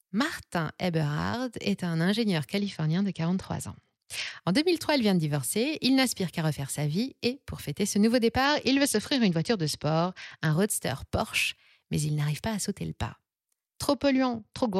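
A congested Bluetooth link forced the encoder to cut its SBC bit pool three times, at 2.58 to 4.39 s after "est un ingénieur", at 8.45 to 10.53 s after "pour fêter ce nouveau", and from 13.94 s to the end. Each Bluetooth SBC bit pool drop starves the top sub-bands and quantises the rest coarsely, so the speech turns dull and gritty, a degradation that suggests a fall from a bit pool of 28 to 9, near 78 kbps.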